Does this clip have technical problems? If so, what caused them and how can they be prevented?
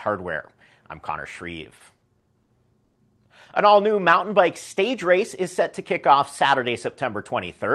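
Yes. Between 1.63 and 2.97 s there are repeated stalls (stutter): seven times the jitter buffer ran dry, and the receiver stretched the last sound, fading it in the longest wait of 110 ms, filling about 280 ms, roughly a fifth of that span. Unlike packet loss, nothing is skipped; the sound drags and catches instead. Steadier network delivery, or a jitter buffer allowed to hold more delay, would prevent it.

From 3.94 to 4.42 s a jitter buffer slow-down adds 37 ms, running the sound at 93% speed by repeating single pitch periods. Unlike a resampling slow-down, the pitch stays the same, with sounds drawn out. Reducing delay swings on the network would remove the need to rebuild the buffer.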